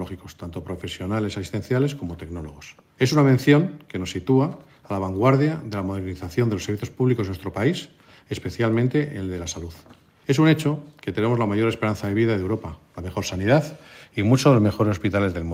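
Nothing in this one trips the ear at any point; it just rolls along without a single hiccup worth flagging.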